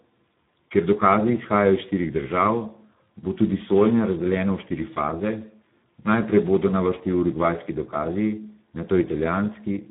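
Speex codec damage runs through the whole speech clip: the low-rate CELP coding leaves too few bits for the excitation, so the voice turns hoarse and noisy. The damage is heavy, consistent with about 8 kbps, and nothing survives above 3.8 kHz.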